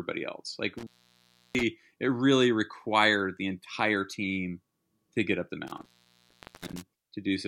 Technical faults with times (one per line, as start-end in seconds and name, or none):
0.78-1.63 intermittent contact
5.67-6.82 intermittent contact